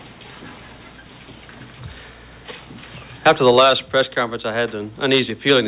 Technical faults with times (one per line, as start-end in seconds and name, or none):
none